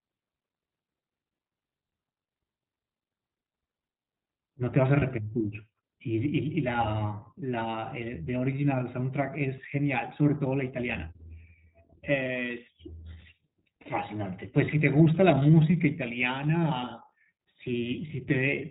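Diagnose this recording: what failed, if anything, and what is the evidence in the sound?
The speech was carried through the iLBC codec at the codec stage, and its narrowband coding is plainly audible throughout. Nothing above 4 kHz survives, so the sound is band-limited and lacks air. The excitation is rebuilt independently for each short frame, which gives the voice a slightly rough, synthetic edge. The framing fits iLBC's 20 ms mode at 15.2 kbps.

Lost iLBC frames are a network fault: packets never arrived and the decoder had to conceal them. At 5.00 s a gap of about 20 ms, which fits one lost frame, is filled with a brief held, slightly buzzy or breathy vowel-like tone. At 13.82 to 13.88 s a longer 40 ms hole, consistent with two consecutive frames, gives a held, slightly buzzy or breathy sustain. The decoder is repeating the last pitch cycle mixed with noise, and the speech recovers immediately afterwards.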